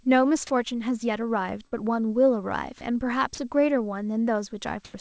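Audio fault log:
1.67–1.83 s, burst of packet loss: a short run of audio never arrived, so the receiver stretched the last sound for about 51 ms and faded it into a buzz or hiss. The sound then picks up again with roughly 60 ms skipped.
3.35 s and 4.85–4.94 s, sound dropped by the voice detector: brief stretches of speech give way to flat comfort noise, about 30 ms and then 90 ms, likely because the sender's detector read quiet sound as background. Above all this sits the call-codec band limit, with nothing above 8 kHz.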